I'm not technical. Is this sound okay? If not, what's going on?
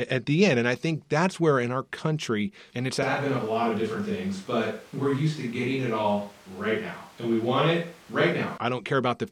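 No. A switch to a distant microphone happens from 3.03 to 8.58 seconds, right after "our country and it's". The speech suddenly turns roomy and hollow, with thinner bass and more background noise, at about the same loudness. The close microphone likely dropped out, leaving one farther away.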